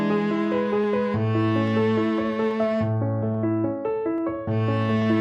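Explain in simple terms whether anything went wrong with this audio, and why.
Yes. A regular click repeats about every 0.84 seconds, from 0.84 s to 5.02 s. These are likely clock drift buffer slips. Two devices' clocks disagree slightly, roughly 200 parts per million, so every so often a few samples get dropped or repeated, causing each click.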